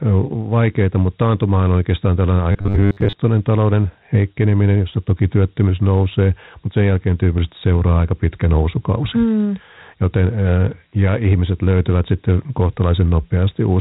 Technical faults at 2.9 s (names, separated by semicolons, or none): Dialogic VOX ADPCM; robotic sound from repeated short buffers